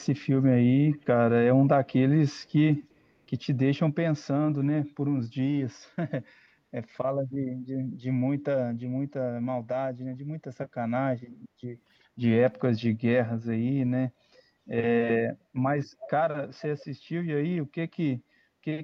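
Echo leak at 0.9, 2.4, 2.9, 16.0, 16.5 and 16.8 s in this speech: delayed copies, about 365 to 375 ms behind, quiet early and much louder near 16 s. A loudspeaker echo canceller likely let its microphone pickup return.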